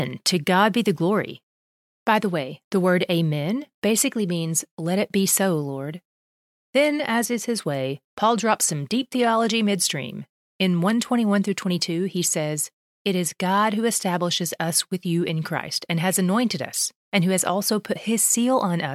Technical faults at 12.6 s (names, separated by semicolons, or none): none